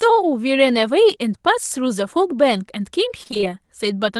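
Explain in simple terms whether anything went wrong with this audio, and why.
From 3.23 to 3.45 s the sound turns choppy, with pieces missing: this is repeated packet loss (robotic sound). Six tiny gaps, none longer than 20 ms, come in quick succession, each partly patched by stretching the sound just before it, rather than one clean dropout.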